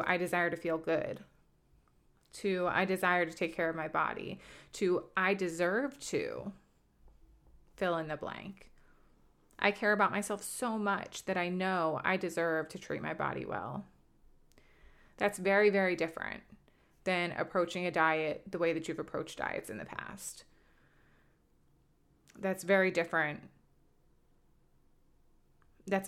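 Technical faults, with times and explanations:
No technical faults can be heard in this speech.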